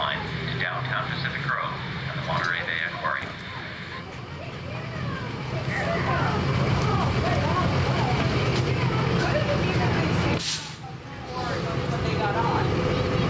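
Throughout the clip there is gain pumping: the gain ducks by roughly 5 dB under every loud sound, leaving the audio squashed. This is likely a fast limiter or compressor reacting to input gain set far too high. The call microphone processing is also audible, with nothing above 8 kHz.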